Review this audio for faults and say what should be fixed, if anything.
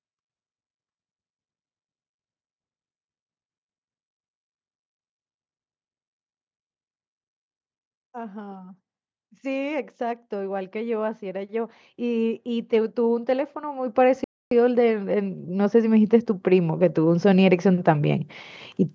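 Automatic gain rising: the automatic gain control judged the input too quiet and kept raising its gain from 9.4 s to 18.3 s, by about 19 dB in total. As a result, the speech and the background noise swell together over those nine seconds. Giving the gain control a target level that matches the microphone's real input, and capping how far and how fast it can climb, would prevent it.

Playback stall: the player likely ran out of buffered data or had its thread blocked, so the output went silent for 0.27 s, from 14.24 s to 14.51 s. The speech stops mid-flow and then carries on after the gap. A larger playback buffer, with the audio thread kept free of blocking work, would prevent it.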